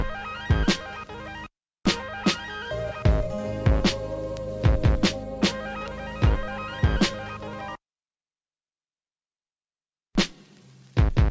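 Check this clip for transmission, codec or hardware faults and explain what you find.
No transmission, codec or hardware fault turns up anywhere in this clip.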